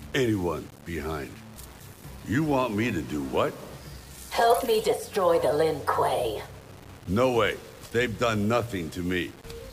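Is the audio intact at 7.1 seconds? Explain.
No. At 7.1 seconds, as throughout the clip, the sound carries a grainy, gritty distortion about 25 dB below the signal, likely from low bit depth without dither, consistent with roughly 7-bit rounding. Unlike steady hiss from dithered quantisation, this grit tracks the sound and coarsens as it quietens.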